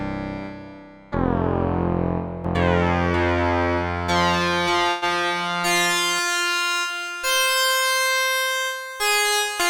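From 2.45 s to 6.19 s a doubled audio track is present: a second full-band copy of the sound runs roughly half a second behind the original, about 5 dB quieter. The copy carries no decay or room colouring, and it cuts in and out abruptly at those two points. The likely cause is the signal being picked up a second time through a slower path, or an edit that left two copies out of alignment.

At 4.89 s, inside the doubled section, a call audio freeze lasts about 0.15 s. The last sound is stretched into a fading buzz or hiss for 126 ms, with no silent stretch. Playback then resumes where it stopped, so nothing is lost, but everything afterward arrives 126 ms later than before. This is likely a delay in packet delivery that emptied the receiver's jitter buffer, leaving it to synthesise filler until the audio caught up.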